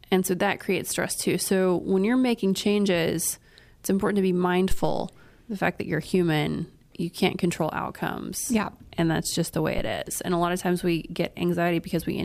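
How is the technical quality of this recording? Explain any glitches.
One fault stands out. At 9.78 to 9.95 s, after "that's just the way", a phantom power thump: a supply switching on or off on a live input sends a step through the coupling capacitors, giving a deep thump peaking about -16 dBFS and decaying within 38 ms.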